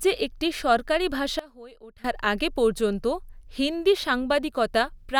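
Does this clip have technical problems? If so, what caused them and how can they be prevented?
Yes. From 1.39 s to 2.04 s the speech abruptly drops by about 21 dB, and the background noise falls with it, then both snap back up at 2.04 s. This is a sudden gain jump, likely caused by a digital gain setting being changed from one sample to the next with no ramp, so the whole signal shifts level instantly rather than fading. Applying gain changes through a short smoothing ramp prevents it.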